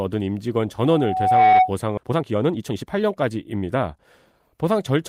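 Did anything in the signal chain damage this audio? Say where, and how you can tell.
Yes. Between 0.82 and 1.74 s there is loudspeaker feedback squeal, which points to the acoustic path from playback back into the microphone. A single 745 Hz tone rises out of the speech over roughly 0.7 s and peaks at about 10 dB above it. That is a loop whose gain exceeded one at 745 Hz, so the tone fed on itself and grew.

At 1.97 to 1.99 s the playback does a skip ahead, a fault in the network or jitter buffer stage. The speech jumps forward with no fill, and the two sides are butted together directly. Roughly a second of audio is gone, and the delay drops by about the same amount. That fits a buffer that had built up excess audio and discarded a block of it at once rather than playing it out.

Straight after that comes jitter buffer speed-up, from 2.03 to 3.98 s at 127% speed and again from 4.39 to 4.91 s at 108%. 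The speech sounds hurried, but the pitch stays put, which shows the receiver was cutting out short pitch-period pieces rather than resampling. About half a second is trimmed in the first stretch and some 40 ms in the second, as the buffer drains its backlog.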